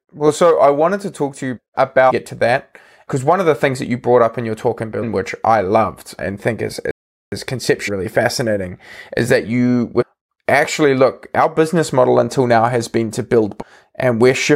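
At 2.09–2.12 s, 5.02–5.04 s, 7.87–7.89 s, 10.00–10.03 s and 13.60–13.63 s, there is damaged data in the compressed stream. At each point the decoder hits corrupt frames, loses sync and hunts for the next valid header. Each produces a roughly 20 ms chirp or blip. Between the second and third of these, from 6.91 to 7.32 s, a playback stall likely occurred because the player was starved of data or its thread was held up. The speech cuts out mid-flow for about 0.41 s of silence, then carries on.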